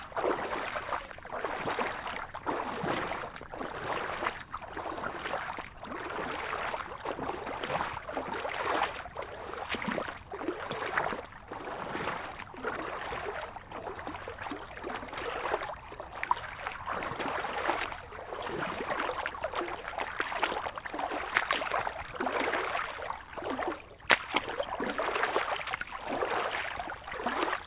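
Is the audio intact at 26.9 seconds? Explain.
Yes, at 26.9 seconds the sound is intact, with no fault of any kind at that moment.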